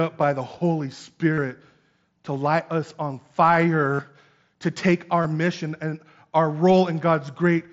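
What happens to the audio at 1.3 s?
From 1.33 to 1.38 s, concealed Bluetooth headset packet loss: about 45 ms of lost packets is filled by repeating recent waveform, giving a buzzy full-level tone and a brief warble, not silence as in a plain dropout.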